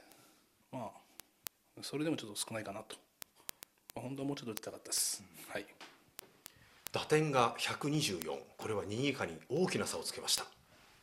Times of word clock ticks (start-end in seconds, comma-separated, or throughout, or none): 0.12-10.92